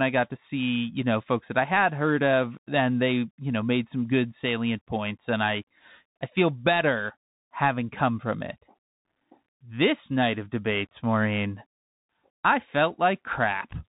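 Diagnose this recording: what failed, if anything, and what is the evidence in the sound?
The speech runs through a Bluetooth CVSD headset codec throughout: a 64 kbps-style delta coder caps everything near 4 kHz, scratches sibilants and lays granular hiss underneath.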